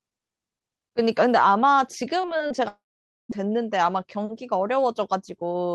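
From 2.21 to 2.60 s the sound turns choppy and robotic: repeated packet loss leaves roughly five short holes, none longer than about 30 ms, each patched by stretching the previous sound. Unlike a dropout, the sound keeps flowing between holes.

At 2.68 s a long network dropout likely begins. The last sound is carried on as a fading buzz, then about half a second of silence follows, and the audio returns at 3.37 s with roughly 0.6 s missing outright rather than chopped.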